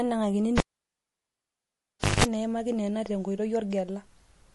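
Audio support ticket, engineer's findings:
Cable pulled and plugged in, 0.58 to 2.24 s: pop, about 1.6 s near-silence, roughly 0.18 s of 50 Hz mains buzz as the tip touches, second pop, then "enaimaki neno tenkoitoi". Live connector pulled and reseated, so check that jack.

MP3 compression throughout, plainly audible: watery, swirly speech, dulled treble, smeared attacks. Likely a low-bitrate encode, fits around 48 kbps, where the encoder cuts the top end and drops weak frequency lines frame to frame.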